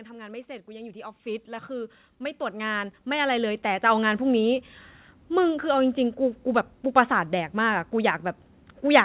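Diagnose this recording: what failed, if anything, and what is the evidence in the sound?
From 0.32 s to 4.26 s the speech and the background swell together, climbing about 16 dB. This is automatic gain rising in the call processing: the AGC judged the input too quiet and ramped its gain up gradually, lifting the noise along with the voice.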